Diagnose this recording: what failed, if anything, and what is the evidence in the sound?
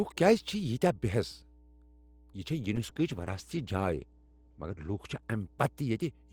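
A ground loop or nearby transformer in the analogue wiring couples the power line in, leaving a steady 60 Hz mains hum around 25 dB below the speech throughout.

A call bitrate drop from 2.76 s to the end: the bandwidth estimate collapsed, and the speech turns rough and muffled, cut off above 8 kHz instead of 20 kHz, which suggests roughly 40 falling to 12 kbps.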